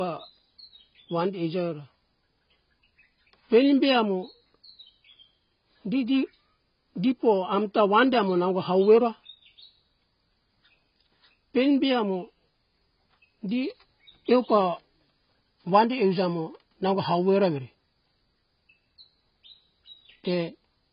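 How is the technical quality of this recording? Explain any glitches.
Technical quality is poor: the speech carries heavy codec damage from start to finish.

The damage runs throughout, and the likely cause is AAC compression, in the AAC-LC form at a very low bitrate, one that fits about 16 kbps. With so few bits, the encoder discards everything above 5.1 kHz and quantises the remaining bands coarsely. The speech therefore sounds dull and muffled, with a smeared, warbling texture and a fizzy edge on sibilants.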